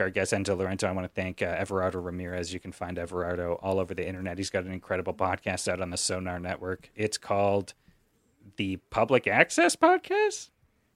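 Speech recording with no audible technical faults anywhere in the clip.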